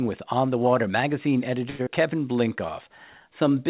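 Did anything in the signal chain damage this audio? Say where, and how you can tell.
Yes. A short stall from a late packet at 1.70 to 1.81 s: the network delivered a packet late, the jitter buffer ran dry, and the last sound was held for 92 ms before playback resumed with nothing lost.

A skip ahead at 1.83 to 1.88 s: right after that, the buffer dropped queued audio to catch up. Roughly 70 ms of speech is missing, and the two sides are joined almost directly.

A jitter buffer slow-down from 2.33 to 2.93 s: the buffer rebuilt its reserve by repeating pitch periods, so the speech plays at 92% speed with no change in pitch and sounds drawn out.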